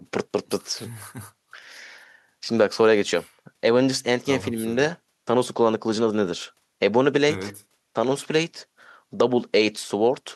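No dropouts, clicks, distortion, level jumps or timing faults are audible anywhere in the recording.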